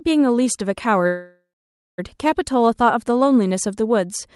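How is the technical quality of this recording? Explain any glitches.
The speech has one clear glitch: a call audio freeze from 1.07 to 2.0 s. The audio halts mid-flow and the last sound is stretched into a buzzy or hissy tail that fades out, leaving about 0.55 s of silence before the speech resumes where it stopped. This is likely caused by packets stalling in transit so that the jitter buffer ran dry. The receiver invented roughly 0.9 s of filler, so nothing is lost and everything after it runs about 0.9 s late. On a spectrogram, the last frame's harmonics smear horizontally and fade to a blank band. The waveform shows a decaying envelope, then flat silence. The speech has an Opus-style call codec character, with content that stops near 12 kHz.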